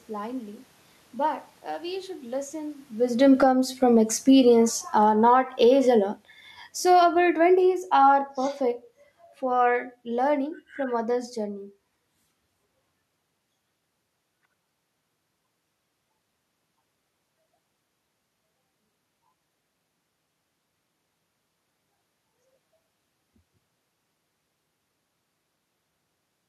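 A speech clip with automatic gain falling twice. Right after "uh we should listen", from 3.08 to 3.59 s, the level drops by about 10 dB. Again from 4.2 to 8.92 s, it sinks slowly by about 10 dB. The automatic gain control judged the input too loud, or its background noise too strong, and pulled its gain down. The room noise sinks along with the voice, which marks the gain, not the talker, as the cause.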